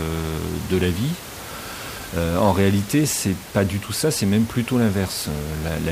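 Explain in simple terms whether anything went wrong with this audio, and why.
Nothing went wrong with the recording; the only thing besides the speech is a gentle background noise from the room itself, which sits well beneath the speech and comes from the space where the microphone was, not from the equipment.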